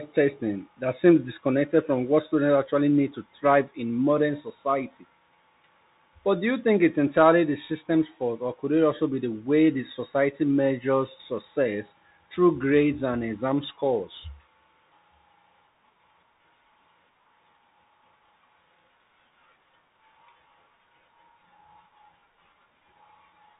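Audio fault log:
throughout, Bluetooth CVSD headset codec: the speech passes through a one-bit delta coder that sends only up-or-down steps, which fits a 64 kbps CVSD link. Nothing above 3.8 kHz survives, loud high sounds overrun the adaptive step and distort, s sounds turn scratchy, and granular hiss sits underneath.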